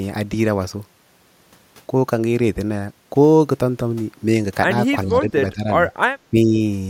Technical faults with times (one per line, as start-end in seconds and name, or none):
5.04-5.69 speech suppressed in double talk
6.30-6.59 speech suppressed in double talk